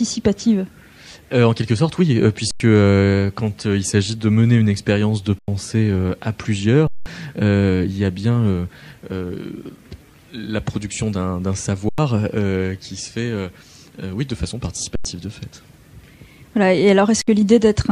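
The audio drops out six times, at 2.51, 5.39, 6.87, 11.89, 14.95 and 17.22 s. Each is an underrun with held sample: the output buffer ran dry and the converter just froze on its last value, so the waveform flatlines rather than clicking off. Most gaps last about 93 ms, which fits a 4096-sample buffer, and the one at 6.87 s is double that. Live material went missing in each gap.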